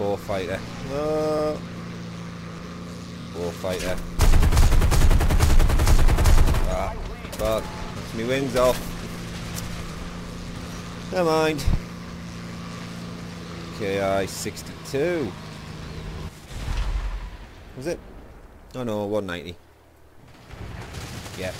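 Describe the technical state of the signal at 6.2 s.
At 6.2 s the signal is intact, with no audible fault at that moment.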